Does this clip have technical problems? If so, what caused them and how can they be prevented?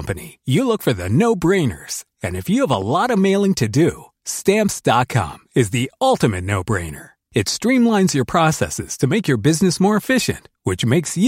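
Yes. A sudden voltage step, likely from a plug being seated, a switch or a static discharge somewhere in the chain, was added to the signal, and the circuits after it shaped it into short pulses. The result is a loud pop, heard as two quick thumps between 2.74 and 2.84 s, peaking a few decibels above the speech, which continues underneath. To prevent it, make connections and switch devices before recording, and keep the chain grounded and free of static.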